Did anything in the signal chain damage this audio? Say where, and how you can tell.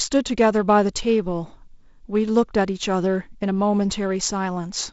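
No, nothing damaged this audio.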